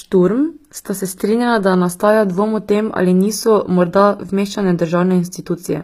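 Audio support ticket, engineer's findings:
Treble gritty and lispy on s sounds throughout, bandwidth stopping at 15.5 kHz. Likely HE-AAC compression, with replicated upper bands misaligned; fits a low bitrate near 24 kbps.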